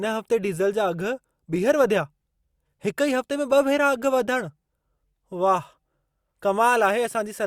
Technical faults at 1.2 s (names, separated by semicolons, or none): none